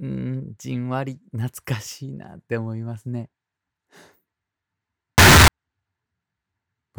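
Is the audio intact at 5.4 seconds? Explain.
No, around 5.4 s there's a float-read-as-integer fault from 5.18 to 5.48 s: the sound turns blasting, harsh and near-square, likely from 32-bit float samples read as integers.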